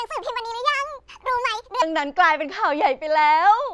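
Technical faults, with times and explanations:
0.00 to 1.82 s, wrong sample rate: the speech comes out high and rushed, running 1.5 times too fast and about 7 semitones sharp, which fits 16 kHz audio being played at 24 kHz with no conversion, so speed and pitch shift together.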